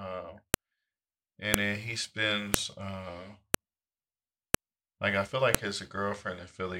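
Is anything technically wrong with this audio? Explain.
Yes. Sharp, loud clicks cut through the speech at 0.54, 1.54, 2.54, 3.54, 4.54 and 5.55 s. The one at 1.54 s lands just before "then he", the one at 2.54 s right after "then he", and the last just after "like I feel". They recur exactly every 1.0 s regardless of the speech, the signature of a file header played as audio. Separate one-second WAV pieces were joined without stripping their headers, so those header bytes play back as a brief snap.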